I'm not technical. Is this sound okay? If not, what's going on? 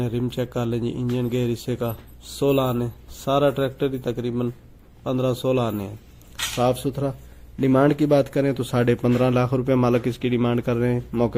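Yes, it sounds fine: nothing skips, crackles, cuts out or glitches anywhere in it, so there's nothing here to worry about.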